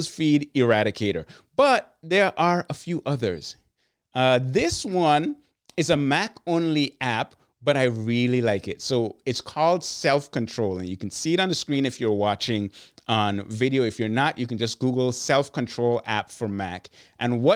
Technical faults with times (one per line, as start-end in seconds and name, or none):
none